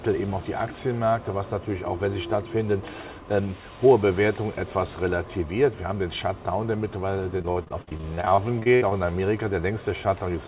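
From 7.38 to 8.93 s, repeated packet loss makes the audio choppy and robotic: holes up to 57 ms, patched by stretching the previous sound, recur rapidly rather than as one isolated dropout. The band stops at 4 kHz, which fits a narrowband call codec such as G.711.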